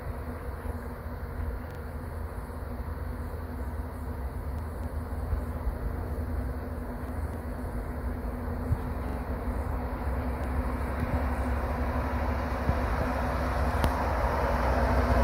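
At 1.71 to 1.79 s, a short stutter is heard, the same sliver of sound playing three times in a row with a hard edge at each restart. This is a repeated buffer: fresh audio failed to reach the output in time, so the device played its last block twice more. Each repeat lasts about 43 ms, which fits a 2048-sample buffer. The sound then continues from where it left off, with nothing skipped.

From 4.59 to 5.09 s, the sound turns briefly jumbled as two quarter-second pieces play in the wrong order. These are chunks out of order: a 250 ms chunk arrived one chunk late and was played after the piece that should have followed it. Nothing is missing, but the swap creates three abrupt joins. The same thing happens again from 7.09 to 7.59 s, with the same chunk length and the same one-chunk delay.

At 9.09 to 9.17 s, the triple stutter returns, another repeated buffer with two extra plays of a roughly 43 ms block.

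At 10.44 s, a tiny catch is heard, a single slice of about 15 ms repeated before the sound jumps ahead. This is a Bluetooth stutter, in which the receiver refilled a gap with its last buffer. The gap points to one lost packet, and the audio resumes as though it had kept playing through the dropout.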